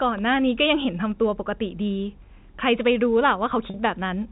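Speech carried over G.711 telephone coding, cut off above 4 kHz, has one dropout at 3.70–3.74 s: packet loss with pitch repetition. The receiver loops the last pitch period for 40 ms, which fits two 20 ms packets, making a brief buzzy hold. It shows as identical repeating waveform cycles and flat, unchanging harmonic stripes on a spectrogram.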